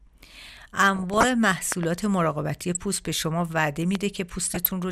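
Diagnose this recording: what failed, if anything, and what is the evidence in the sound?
DAB burbling, a codec-stage fault: from 0.92 to 1.25 s and 4.48 to 4.66 s, residual bit errors make sub-bands jump, giving burbling noise blips that show as flickering spectrogram blocks over the speech.

Loud pop, analogue wiring: a double pop at 1.72 to 1.85 s and a single one at 3.95 to 3.97 s, likely switch or static spikes, appear as sharp waveform spikes about 15 dB above the signal.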